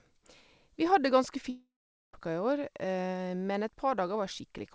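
Speech reaching the listener through a call codec with nothing above 8 kHz, which fits G.722, breaks up in a long network dropout from 1.50 to 2.15 s, likely caused by packets never arriving. The last sound is stretched into a buzz that fades, followed by about 0.45 s of silence. Speech then resumes with about 0.64 s missing. On a waveform this appears as a decaying smear followed by a flat gap. A spectrogram shows blurred, repeating harmonics fading into a blank band.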